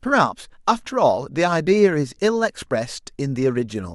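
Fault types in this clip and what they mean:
No faults can be heard.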